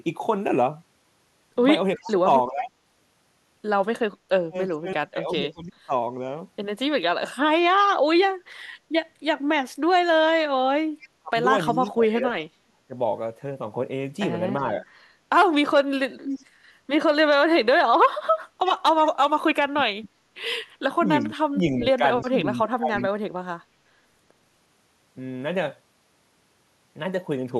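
From 1.96 to 7.34 s, 11.21 to 16.03 s and 19.61 to 23.12 s, the speech dips and cuts out in pieces, by up to about 35 dB and then about 30 dB. This is likely speech suppressed in double talk, where the echo canceller muted the talker while the far side spoke.

At 1.97 to 2.12 s, 11.0 to 11.9 s and 16.24 to 23.03 s, a copy of the speech returns 358 ms late, at about 20, 25 and then 10 dB below the speech. This is likely echo leak from a loudspeaker whose echo canceller let part of the signal through.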